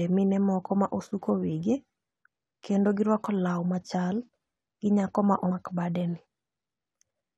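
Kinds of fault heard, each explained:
Damaged data in a compressed stream: part of the encoded speech arrived corrupted, so the decoder misread those frames, lost sync and hunted for the next valid header. At 5.51 s, after "gi nyako ma" and before "bade ni", this comes out as a brief glitch.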